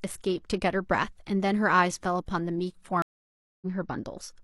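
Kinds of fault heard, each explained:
Stream reconnect: the link broke, so the speech cuts to silence for 0.59 s at 3.02 s, then a fresh decoder resumes at 3.66 s roughly a third of a second further on. Unlike a simple dropout, material is skipped, not just silenced.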